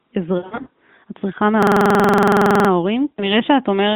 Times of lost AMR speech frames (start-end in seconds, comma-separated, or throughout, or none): 0.38-0.70, 3.11-3.36